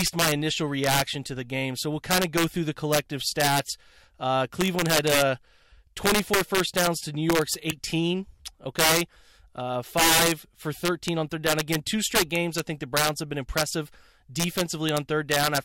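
Integer overflow runs through the whole speech clip. The gain drives it about 10 dB too hot, and around one percent of samples pass the largest integer. Those peaks wrap to the opposite sign instead of limiting. Loud moments crack violently, far harsher than clipping.

From 7.69 to 7.72 s there is damaged data in a compressed stream. Corrupt bytes there throw the decoder out of sync. It misreads the frames and hunts for the next header. The result is a brief glitch in the sound.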